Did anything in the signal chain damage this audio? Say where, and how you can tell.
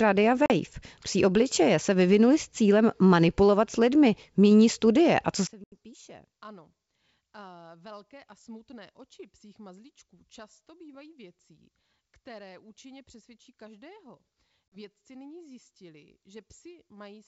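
Yes. Network stage: packet loss on an ADPCM call. Hard silent gaps at 0.46, 5.64 and 14.70 s, 40 to 80 ms long, then slightly distorted speech while the decoder's predictor resyncs.

From 5.47 s to the end, the speech drops about 25 dB and turns faint. The likely cause is one channel inverted in the wiring, so the centre cancels when summed to mono.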